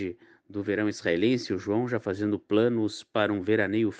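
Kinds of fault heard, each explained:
No kinds of fault are heard in this speech.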